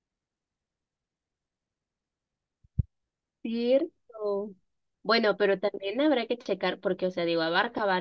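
Nothing in the speech stood out as a technical fault on listening.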